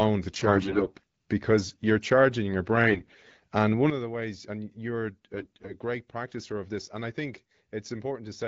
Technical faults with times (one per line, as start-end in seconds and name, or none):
0.30-1.03 AMR bit errors
2.86-3.44 AMR bit errors
3.90-8.47 sudden gain jump
5.36-5.72 AMR bit errors